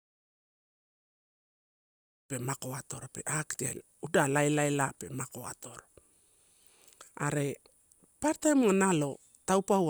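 No technical faults occur at any point in this speech, and its gentle fade-in at the opening is an ordinary edit.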